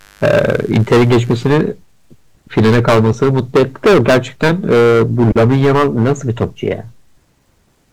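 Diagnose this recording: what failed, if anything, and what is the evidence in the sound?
Hard clipping runs through the whole speech recording, and the speech is overdriven by about 19 dB. The fault sits at the converter or a sample-format stage that cannot pass the signal's full amplitude. Every peak is sheared flat, and roughly a tenth of the samples are pinned at the limit. The squared-off waveform adds harmonics high into the spectrum, so every loud syllable carries a harsh, fuzzy distortion rather than occasional crackle.

Mains buzz is present from 0.0 to 1.5 s. It points to the analogue wiring, where a dimmer, rectifier or poorly shielded run injects switching spikes twice per 50 Hz cycle. Those spikes build a dense ladder of 50 Hz harmonics reaching into the kilohertz range, heard as a steady, raspy buzz. It sits faintly, well below the speech, and it stops at 1.5 s.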